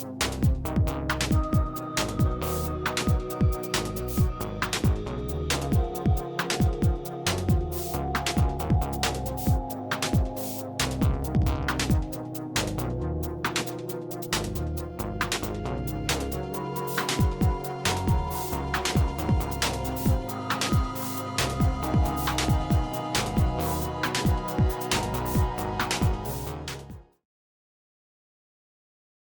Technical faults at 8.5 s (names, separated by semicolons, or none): none